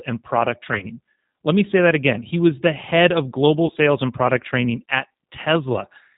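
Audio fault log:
throughout G.729 codec: speech is rebuilt from a vocal-tract filter, pitch predictor and a few pulses, so it sounds rough and synthetic, consistent with an 8 kbit/s codec, with nothing above 4 kHz.
0.74–0.87 s VoIP packet loss concealed by the speech codec: about 40 ms of audio was lost in gaps spread over 80 ms, the longest 30 ms. The decoder stretches the last sound into a fading buzzy tone or coloured noise, and the speech stays weak briefly afterwards.
3.67–3.72 s VoIP packet loss concealed by the speech codec: 20 ms of lost audio is filled by extrapolating the previous frame, leaving a short smear and a weakened onset as the speech resumes.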